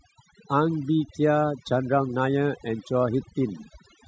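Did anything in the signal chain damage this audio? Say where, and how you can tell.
Yes: the noise-suppression stage ran far too strong throughout, shutting off bands near its noise estimate, leaving twinkling specks in near-silence: overdone noise removal.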